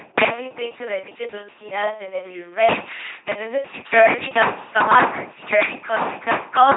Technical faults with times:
0.00-6.76 LPC-10 vocoder

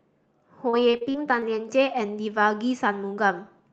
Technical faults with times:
0.69-1.44 repeated packet loss (robotic sound)

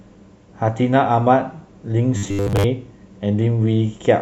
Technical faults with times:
2.17-2.65 robotic sound from repeated short buffers

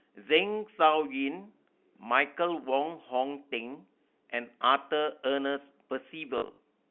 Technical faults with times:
6.38-6.58 packet loss with last packet repeated

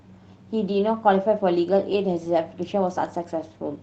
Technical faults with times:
1.91-1.93 lost packet rebuilt from error correction

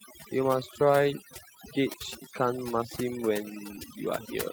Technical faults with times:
0.00-4.53 overdone noise removal
3.75-3.79 short concealed packet loss

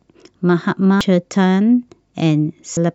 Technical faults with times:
1.01 damaged data in a compressed stream
2.77-2.80 damaged data in a compressed stream

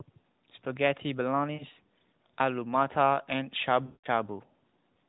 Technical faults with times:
1.54-1.66 lost AMR speech frames
3.86-4.07 lost AMR speech frames

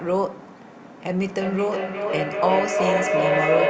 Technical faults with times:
1.21-3.69 feedback echo between two devices

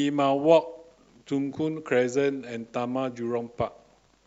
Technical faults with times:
none

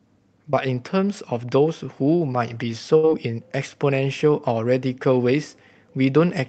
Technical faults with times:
0.51-0.55 short concealed packet loss
2.97-3.05 burst of packet loss

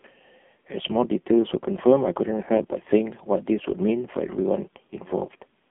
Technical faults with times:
0.00-5.70 AMR narrowband mobile codec

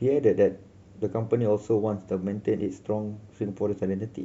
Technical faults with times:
none

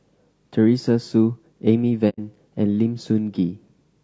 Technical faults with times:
0.00-4.03 low-delay AAC compression
2.09-2.19 AAC frame loss with muting

